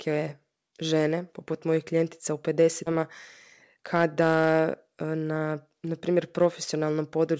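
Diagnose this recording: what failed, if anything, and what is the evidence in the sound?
The network and jitter-buffer stage failed. At 2.86 s, right after "poput mojih klijentica u", playback jumps forward with no silence or fill, and roughly 0.7 s of speech is missing. This is a skip ahead: audio already queued behind the lost stretch was played at once, and the delay dropped by that same amount. A dropout or concealment gap would leave silence or a smeared fill. Here the two sides are butted together.

From 3.76 to 5.48 s the speech runs at about 114% speed while the pitch stays put. This is a jitter buffer speed-up. The buffer had built up surplus delay, and the receiver removed short pitch-period-sized slices over and over, about 0.3 s in total, to catch up. A resampling or clock-rate error would raise the pitch along with the tempo. This passage sounds hurried but not higher. Both events pass through a G.722-style call path, with nothing above 8 kHz.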